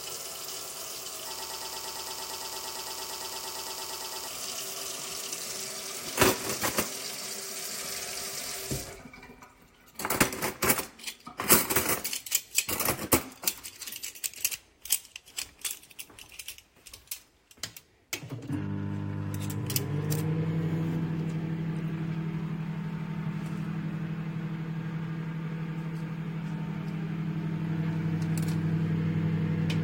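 From 1.39 to 4.27 s a broken-record loop takes over: a 114 ms fragment plays 25 times back to back, identical each time, producing a rapid mechanical buzz-like chatter at roughly nine repeats per second. The likely cause is a stalled player or stream that kept resending the last fragment it held, so the audio due in those seconds is gone. Unlike an echo, the repeats never fade or soften, and unlike a dropout, there is no gap.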